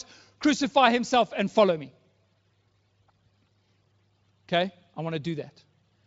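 Nothing stood out as a technical fault on listening to this speech clip.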